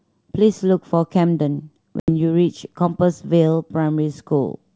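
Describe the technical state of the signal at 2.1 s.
At 2.1 s the speech comes back from a hard-edged silent gap spanning 2.00 to 2.10 s, with brief distortion that settles within tens of milliseconds. This is packet loss on an ADPCM call: about 80 ms, roughly four packets, went missing, and the G.722 decoder's predictor and step size fell out of step with the sender's.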